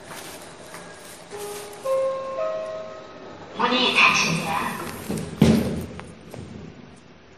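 From start to finish the sound carries layered compression damage, likely from transcoding between lossy codecs, with an earlier low-rate MP3-style stage re-encoded into WMA. The damage suggests a first pass around 43 kbit/s, with a second pass nearer 64 kbit/s adding its own artefacts over the old ones. Nothing survives above 15.1 kHz. On a spectrogram this shows as a hard ceiling plus blotchy, patchy upper bands.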